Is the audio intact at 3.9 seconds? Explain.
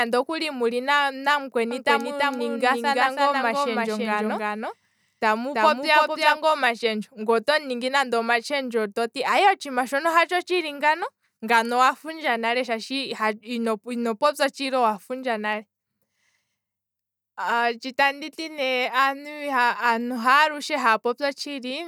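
No. A doubled audio track spans 1.71 to 6.37 s: a dry copy, about 5 dB quieter, trails roughly 300 ms behind, likely from duplicated capture.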